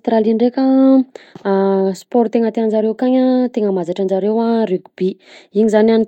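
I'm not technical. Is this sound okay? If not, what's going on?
Yes, nothing stood out as a problem when listening to this speech recording.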